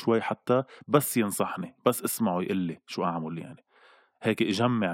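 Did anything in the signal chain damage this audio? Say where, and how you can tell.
No, nothing in the chain damaged this speech recording.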